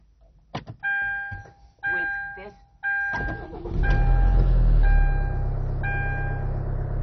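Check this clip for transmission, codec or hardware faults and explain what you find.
One codec fault runs through the whole clip.

MP2 compression, present from start to finish: the sound is dull, with nothing above 6.1 kHz, and carries a heavy gurgling, granular roughness, most likely from MPEG Layer II coding starved of bits, which fits a rate around 32 kbps. Short of bits, the encoder shuts off the upper sub-bands entirely and quantises the surviving ones coarsely, so the top end vanishes and the remaining bands flicker and churn.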